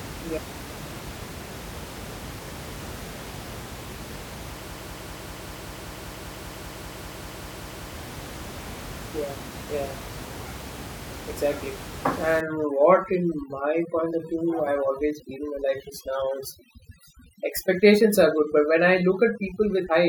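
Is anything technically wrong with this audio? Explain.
Yes, there are two problems. From 4.71 to 7.94 s there's a broken-record loop: a 195 ms snippet of the speech repeats exactly, back to back, 17 times. That's likely the player or stream stalling and resending the last fragment it held, so whatever should have played there is gone. From 12.41 s to the end there's overdone noise removal. The room noise, which sits about 14 dB under the speech, drops and breaks up into little twinkling specks, and the quieter parts of the voice get cut along with it.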